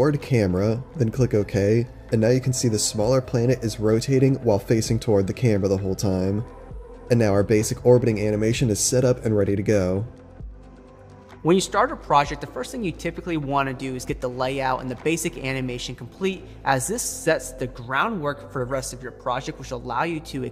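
A brief blip of misplaced sound, a chirp, squeak or noise burst, appears from 18.43 to 18.45 s, peaking at about -35 dBFS. This is a corrupt frame decoded: a single compressed frame had flipped bits, and the decoder played it anyway, scattering energy across wrong frequencies.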